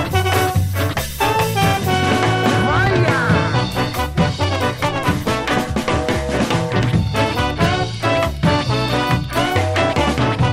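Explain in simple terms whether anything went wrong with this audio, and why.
Two brief faults stand out, both a repeated buffer. At 2.87 s the playback device ran out of fresh audio and replayed its last tiny slice once; at 6.14 s it replayed a slice twice. Each slice is so short, which fits a 5 ms buffer, that the repeats sound like a quick click or buzz rather than a stutter. Unlike a dropout, there is no silent gap and nothing seems to be missing.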